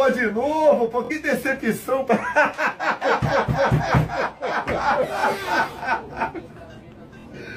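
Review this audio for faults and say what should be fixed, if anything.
Bluetooth stutter at 1.05–1.11 s, 5.20–5.24 s and 7.20–7.26 s. Late packets made the receiver replay its last buffer, skipping about 46, 23 and 46 ms. Keep the link strong and close to prevent it.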